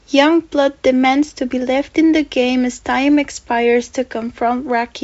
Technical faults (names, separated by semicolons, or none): none